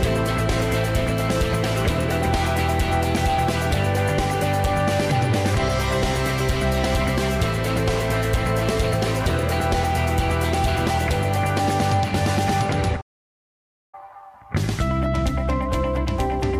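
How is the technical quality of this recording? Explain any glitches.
There is one clear glitch. Playback stall, 13.01 to 13.95 s: the player likely ran out of data or was blocked, so the sound falls silent mid-flow for 0.92 s before resuming.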